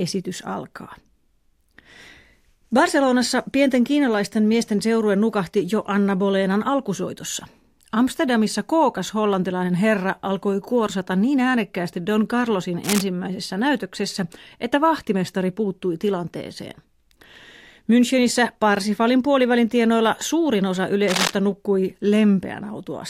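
A worn cable or connector likely shifted, making contact resistance flicker and causing cable scratch noise. A brief rustling burst sits slightly below the speech from 12.83 to 13.04 s, before "näytöksessä että vahtimestari puuttui". A louder scratch about as loud as the speech follows from 21.08 to 21.33 s, after "puolivälin tienoilla suurin osa".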